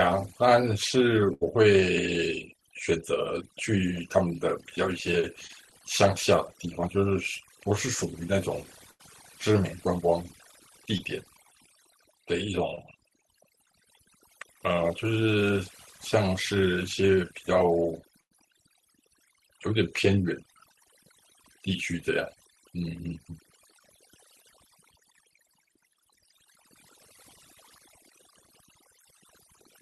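A speech recording carries overdone noise removal throughout, plus several dropouts from lost packets. The noise reduction was set too hard. Any frequency band sitting near the tool's noise estimate is pulled far down or shut off, so the background collapses to near silence flecked with twinkling specks, and the quieter parts of the voice are stripped away with it. Unlike a dropout, this never comes and goes: it runs through the whole clip. A burst of packet loss strikes three times, at 1.33–1.43 s, 8.91–9.01 s and 18.21–18.33 s. Each time about 80 to 100 ms of audio fails to arrive. The receiver stretches the last sound across the hole for roughly 76, 86 and 96 ms, fading it as it goes, so a voiced sound turns into a held buzz and an unvoiced one into a dying hiss. The speech then picks up further along with that stretch missing. Short concealed packet loss appears at 5.47–5.51 s, 10.97–11.01 s and 12.75–12.79 s. 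Here only about 20 ms goes missing and roughly 18 to 19 ms is patched from the preceding pitch or shaped noise, then blended back in. What separates these from the bursts is length: they pass as a quick smear or wobble, with no audible held buzz, though a brief consonant can drop out entirely.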